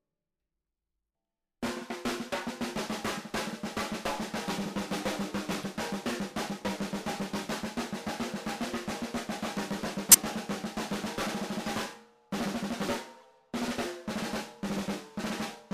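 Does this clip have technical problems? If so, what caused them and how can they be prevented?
Yes. Corrupt frame decoded: brief bursts at 5.62–5.65, 10.11–10.17, 11.63–11.68 and 13.16–13.27 s, strongest at 10.11 s and weakest at 13.16 s. Flipped bits misplaced energy across the spectrum, adding foreign sound where a dropped frame would leave a gap. Checksums with error concealment prevent this.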